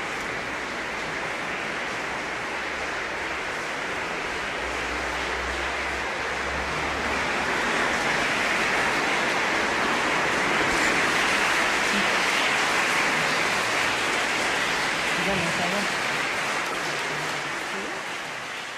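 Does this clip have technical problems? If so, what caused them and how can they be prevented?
Yes. From 16.69 to 16.81 s a short burst of misplaced energy cuts through the audio, peaking fairly loud, around -15 dBFS. This is a corrupt frame decoded: flipped bits in a run of compressed frames left gains and codes misread, and the decoder played them anyway, spraying energy at the wrong frequencies for about 0.12 s. Unlike a dropout or concealed packet loss, something foreign is added instead. Checksums that detect damaged frames and conceal them would prevent it.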